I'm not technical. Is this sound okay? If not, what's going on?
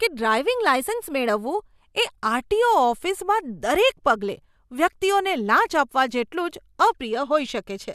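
No. From 0.38 to 1.29 s, software that keeps two clocks in step likely made a drift correction step, jumping the playback rate by about 5.7% to rebalance its buffer. The speech briefly runs faster and sounds almost a semitone higher, then snaps back.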